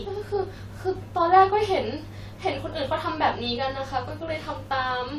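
No technical faults can be heard anywhere in this recording.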